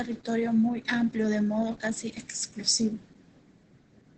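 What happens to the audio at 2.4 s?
At 2.4 s the speech sounds muffled, hoarse and slightly robotic, with no sparkle in the consonants and nothing above about 8.8 kHz. The damage runs through the whole clip. This is heavy Opus voice compression in its SILK linear-prediction mode: the band is held to wideband, and the excitation behind the voice is coded so coarsely that the grainy, synthetic texture fits a very low bitrate of around 10 kbps.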